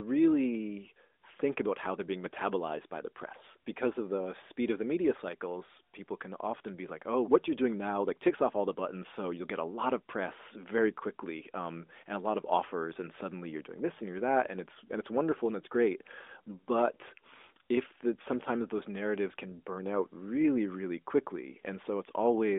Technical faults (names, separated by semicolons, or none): none